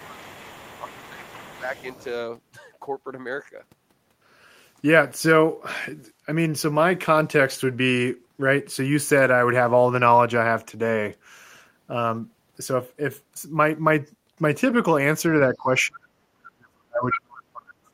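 From the start to 2.04 s, faint other side's voice leaks through, sitting well below the talker. This is likely an echo canceller leaving residual loudspeaker sound in the microphone. Unlike room reverberation, it is a separate second voice rather than a smeared tail of the talker. Over the same stretch the talker's speech is suppressed in double talk, with short, moderate dips at 0.0 s, 0.82 to 1.25 s and 1.44 to 1.7 s. The canceller likely turns down both voices together while the two sides overlap.

Later the suppression grows much deeper. From 15.51 to 16.11 s the speech sinks sharply, and from 16.38 s to the end it drops almost to silence. That gating follows the overlap, which sets it apart from a network dropout. At 17.11 s a brief scrap of the other side breaks through, nearly as loud as the talker.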